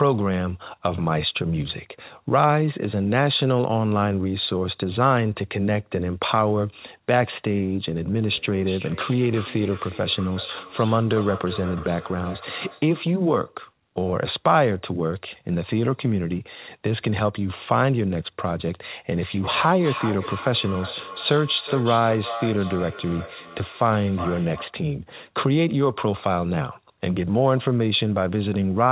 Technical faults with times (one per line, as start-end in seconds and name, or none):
8.27-12.93 feedback echo between two devices
19.09-24.81 feedback echo between two devices